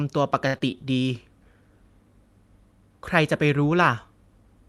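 Speech over what sounds like an Opus call path around 32 kbps, top end stopping near 12 kHz, and two glitches right together early on. From 0.47 to 0.56 s there's a short stall from a late packet: the jitter buffer ran dry, so about 67 ms of the last sound gets stretched before carrying on with nothing lost. Then from 0.58 to 0.77 s comes a short concealed packet loss, with about 40 ms never arriving and a brief smear patched over the gap.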